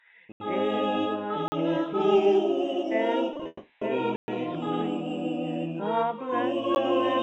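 Right at the start there's a block of digital silence from 0.32 to 0.40 s, an 80 ms hole where the output just drops out and comes back with no fade. You get a clear gap there. The same thing happens again at 1.48 to 1.52 s, 40 ms this time, so it's more of a quick pop. The likely cause is the playback side not filling its buffer in time.

Around 3.33 s things get choppy. Three short concealed packet losses land at 3.33, 3.37 and 3.43 s, each covering 20 ms. The receiver patched each hole by stretching the sound just before it, so you hear a brief smeary wobble rather than a true gap.

Right after that, from 3.47 to 3.83 s, there's a stretch of roughly a third of a second where the sound turns into a fading buzz or hiss continuing what came before. It then picks up again further on, with that portion missing. This is likely a long network dropout, with concealment filling the entire gap rather than going silent.

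The digital silence comes back at 4.16 to 4.28 s as a 120 ms hole. At 6.75 s there's one more, only about 13 ms long, which reads as a single tick. Underneath all of this you can hear the Opus call path at 64 kbps, which limits the top end to 8 kHz.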